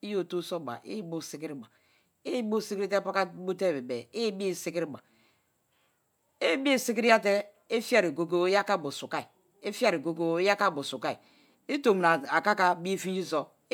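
A listener hears a speech recording with no audible technical faults anywhere in it.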